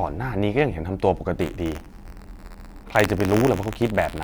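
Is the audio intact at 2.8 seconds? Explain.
No. At 2.8 s the speech is inside a stretch of buffer tearing that runs from 1.38 s to the end of the clip. The writing program and the playback hardware have drifted so they cross within every period, leaving a small sliver of each buffer filled with audio about 50 ms old, joined hard on both sides. The result is a continuous robotic buzz at 86.1 Hz, which fits a 512-sample buffer, present wherever there is signal.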